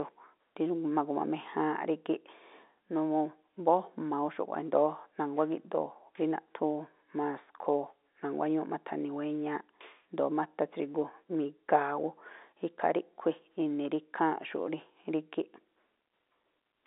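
No technical faults are audible.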